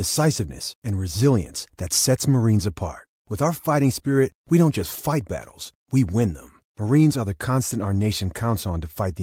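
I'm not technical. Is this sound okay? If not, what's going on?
Yes, nothing in this recording stood out as a problem when listening to it.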